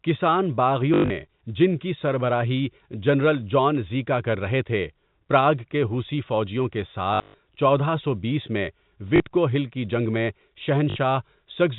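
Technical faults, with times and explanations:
0.94–1.1 s, 7.14–7.38 s, 9.16–9.2 s and 10.9–10.96 s: packet loss with last packet repeated. The receiver fills each gap by replaying the most recent packet, losing about 140, 200, 40 and 60 ms. The longest runs are 100 and 120 ms. The replays seldom join the signal in step with its pitch, and longer runs turn into a brief robotic buzz near 50 Hz, which fits 20 ms packets. This is carried over a G.711 telephone path.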